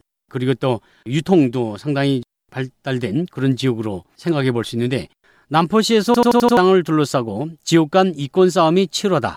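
A rapid machine-gun stutter runs from 6.14 to 6.57 s as one 85 ms piece of speech repeats five times at about 11.7 Hz. This is a system hang loop: the system froze while playback kept cycling a ring buffer, which fits a 4096-sample buffer, losing roughly 0.4 s of audio.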